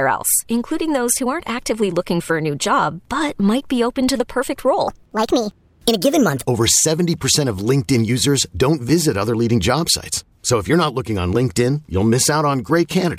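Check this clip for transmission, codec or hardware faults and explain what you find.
One fault is present. Wrong sample rate, 4.88 to 6.42 s: speech runs 1.38 times fast and 5.55 semitones high, which fits 32 kHz audio played at 44.1 kHz. On a spectrogram, the harmonics jump upward and compress in time.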